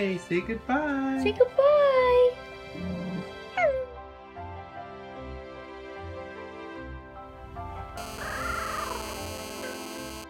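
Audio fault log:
7.98–10.24 s, GSM phone buzz: a nearby 2G phone on a call sends radio bursts 217 times a second, which the audio circuitry rectifies into a hard, raspy 217 Hz buzz rich in harmonics, held steady about 12 dB below the sound and unrelated to it.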